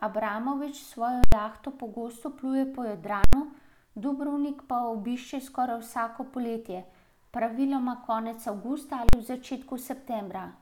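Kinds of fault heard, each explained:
invalid numbers at full scale: three hard bangs in the speech, each a 43 to 85 ms block pinned at maximum level because a calculation produced infinite or invalid values.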